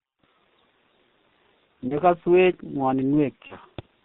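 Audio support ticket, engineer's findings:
G.723.1 codec, whole clip. Speech band-limited below 4 kHz, muffled and hoarse, consonants smeared. Heavy low-rate coding damage, consistent with the 6.3 kbit/s mode: slow-updating voice model across 30 ms frames can't track fast articulation.

VoIP packet loss concealed by the speech codec, 1.89–2.00 s and 3.47–3.55 s. Brief fading smear each time, fits a single lost 30 ms frame. Decoder extrapolates last pitch and filter at falling gain. Distortion persists after packets resume, since each frame builds on the last.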